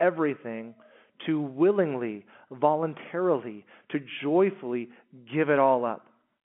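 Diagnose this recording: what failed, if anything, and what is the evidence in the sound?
Nothing stood out on listening; the speech comes through the ordinary telephone-line band, with nothing above about 3.8 kHz, and no stage in the chain gives itself away.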